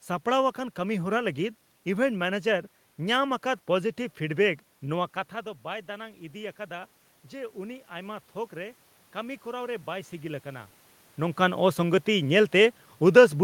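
From 4.94 to 10.74 s there is automatic gain rising. When the talker moved back and the input dropped by about 13 dB, the gain control slowly raised its level by about 7 dB, so voice and room noise swell together over several seconds.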